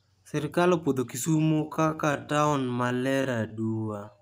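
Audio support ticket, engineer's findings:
Speech pace drops abruptly at 1.22 s and stays slow to end of clip; pitch unchanged, speech drags. Time-stretched section, about 0.59x speed. Likely cause: stretch software padding length by repeating short segments at constant pitch.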